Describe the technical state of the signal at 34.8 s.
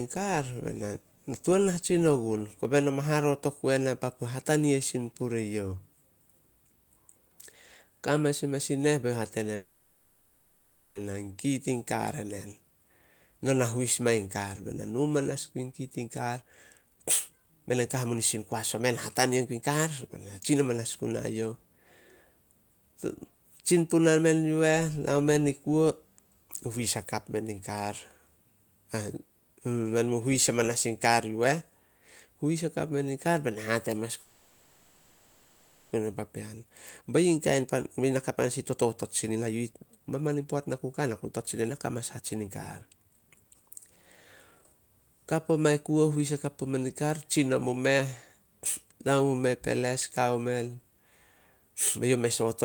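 At 34.8 s the signal is inside a call audio freeze running from 34.22 to 35.94 s. The receiver ran out of audio, likely because packets were held up and the jitter buffer emptied, so it stretched the last sound into a fading buzz or hiss for about 1.7 s. Nothing is lost; the sound resumes where it stopped, now 1.7 s later. On a spectrogram this appears as repeating horizontal bands; the waveform shows a smooth, fading envelope.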